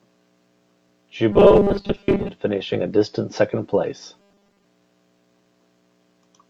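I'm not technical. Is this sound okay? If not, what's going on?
No. From 1.32 to 2.30 s and again from 4.20 to 4.64 s, the speech turns into a stiff metallic buzz at 200 Hz. That's robotic sound from repeated short buffers: audio likely arrived too slowly, so tiny 5 ms snippets got replayed, skipping most of the real speech.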